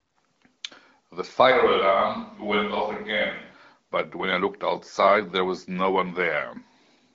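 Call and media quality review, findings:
Speech hollow and roomy, bass thinned, 1.51 to 3.54 s, abrupt at both edges. Likely switch to a distant microphone after the close pickup dropped. Level roughly unchanged, room noise near 35 dB below speech. Hard edges and bass loss distinguish it from added reverb.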